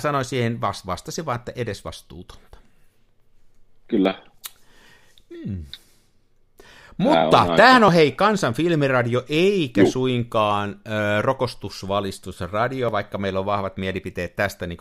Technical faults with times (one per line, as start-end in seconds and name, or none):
1.88 dropped buffer (overrun)
4.05 dropped buffer (overrun)
7.88 dropped buffer (overrun)
12.89 dropped buffer (overrun)